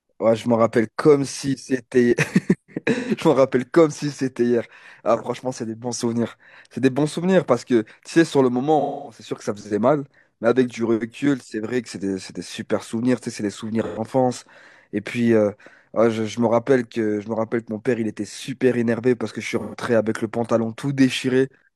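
Speech with AAC frame loss with concealment at 2.95–3.11, 8.80–9.21, 13.83–13.99 and 19.59–19.75 s. The decoder patches each gap from the last good spectrum, giving smeared, noisy patches. On a spectrogram these show as blurred, smoothed bands; the longer 8.80 s gap fits about six lost frames.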